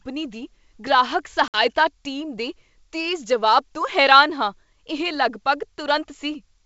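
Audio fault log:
1.48–1.60 s, packet loss on an ADPCM call: a few packets vanish, leaving about 60 ms of silence, a sharp-edged blank column on the spectrogram. The G.722 decoder's predictor and step size then lag the sender's, so speech returns slightly distorted.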